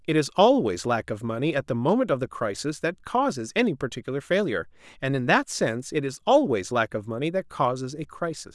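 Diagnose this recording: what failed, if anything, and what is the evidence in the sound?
Nothing in the recording stood out as a fault on listening, so there is no failed stage to point to.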